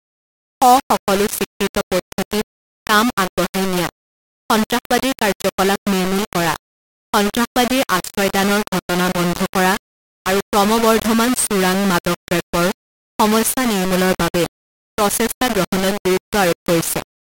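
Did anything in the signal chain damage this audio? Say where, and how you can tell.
Yes: low bit depth without dither throughout the speech, likely sample-format conversion rounding to about 3 bits. The grainy distortion tracks the signal, sitting only about 10 dB below it.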